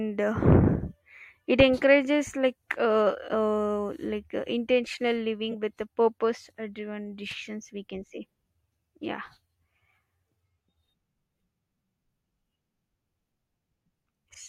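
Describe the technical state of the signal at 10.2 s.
At 10.2 s the speech signal is intact, with no audible dropout, clipping, glitch or other technical fault.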